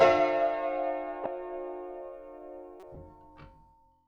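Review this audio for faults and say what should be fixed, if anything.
Corrupt frame decoded at 1.24–1.27 s and 2.80–2.96 s. Bit errors in compressed frames were decoded as if the data were valid. Misread gains and codes put energy at the wrong frequencies, giving a brief, fairly loud blip first, then a longer, quieter burst. To prevent this, verify a checksum on each frame and conceal any frame that fails instead of decoding it.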